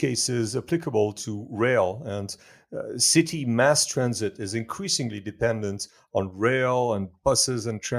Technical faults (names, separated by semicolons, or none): none